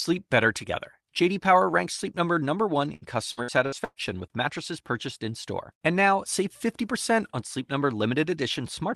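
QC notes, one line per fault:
2.95 to 3.99 s, repeated packet loss (robotic sound): five holes in quick succession, the longest about 121 ms, are each bridged by stretching the preceding sound, so roughly a third of the span turns choppy, unlike a single dropout's one clean gap.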